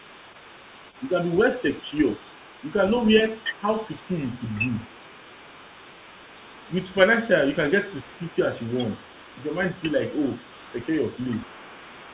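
A faint second voice runs underneath the main talker from start to finish of this speech recording, sitting roughly 25 dB below it. That is the other side's voice leaking through, most likely because the talker's loudspeaker output reached the talker's microphone and the echo canceller left a residue. The call path's band limit is audible too, with nothing above 4 kHz, consistent with G.711 A-law telephone coding.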